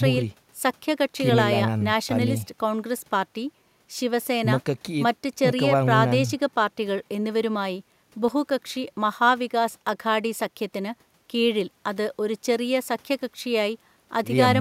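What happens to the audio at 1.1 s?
Nothing goes wrong at 1.1 s; the speech continues intact through that moment with no dropout, click or distortion.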